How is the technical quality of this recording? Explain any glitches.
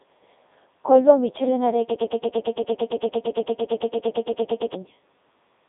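Poor. The speech is heavily damaged throughout and breaks into a long stutter partway through.

Across the whole clip the audio has the robotic, buzzy character of the Codec 2 vocoder. The decoder rebuilds the voice from sine waves using only pitch, voicing, energy and a spectral envelope, so the original waveform is gone. The band runs from about 250 Hz to 3.7 kHz with nothing above 3.8 kHz, which fits Codec 2's highest 3.2 kbit/s mode. Plain band-limiting would sound muffled but still natural, not synthetic like this.

From 1.91 s to 4.74 s there is a broken-record loop. A 113 ms fragment repeats exactly, back to back, 25 times, and the speech that should have played in that span is lost. A stalled player or stream that kept resending its last buffer is the likely cause. Unlike a dropout, the sound never goes silent, and unlike an echo, each repeat is identical and does not decay.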